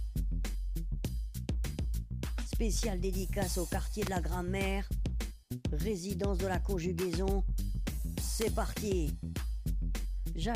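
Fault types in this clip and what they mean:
Electrical switching spike: sharp snaps at 4.07 and 8.41 s, likely from a nearby switch arcing; thin full-band spectrogram lines and narrow waveform spikes, the second louder.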